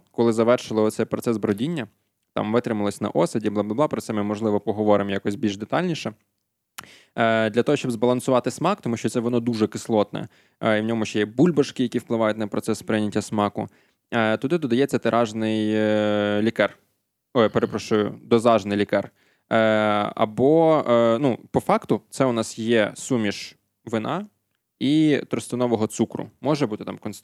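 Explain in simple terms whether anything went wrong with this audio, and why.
Between 5.09 and 5.61 s in this speech clip there are three uneven, evenly spaced clicks: CD scratch ticks. A scratch destroyed more data than the disc's error correction could rebuild on each turn, so the player briefly patched each gap, leaving ticks of only a millisecond or two.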